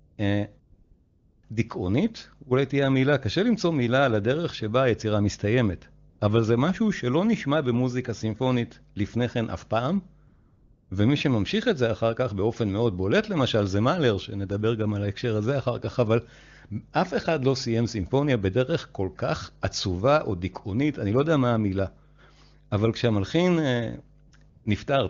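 A steady low drone at 50 Hz runs under the whole speech recording, sitting roughly 30 dB below the talker. This is mains hum: the power line is leaking into the signal through a ground loop or a nearby transformer, and the 50 Hz pitch points to a 50 Hz supply. The gaps between phrases also change character, turning into a smooth, even hiss that switches in and out. This happens from 0.05 to 0.17 s, 0.59 to 1.43 s, 6.09 to 6.19 s, 10.27 to 10.89 s, 24.27 to 24.31 s and 24.49 to 24.65 s. That is AMR comfort noise. The phone decided the talker was silent and stopped sending speech frames, so the receiver filled each gap with synthetic noise built from a rough sketch of the background's level and spectrum. The real room sound drops out during those gaps. The speech itself is clear, which fits a high AMR wideband (HD Voice) rate.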